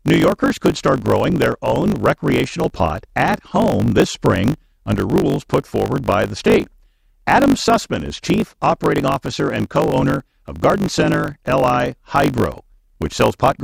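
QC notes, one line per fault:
throughout, block size mismatch (truncated): the speech carries a steady buzz at 50 Hz and runs about 1.07 times faster than normal while keeping roughly its natural pitch. One stage hands over longer blocks than the next stage takes in, which fits 1024-sample blocks being written. The tail of each block is dropped, so the discontinuity at every block boundary repeats as the 50 Hz buzz. Losing those tails shortens the audio by the ratio of the two block sizes.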